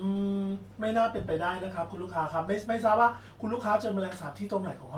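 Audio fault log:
No faults detected in this clip.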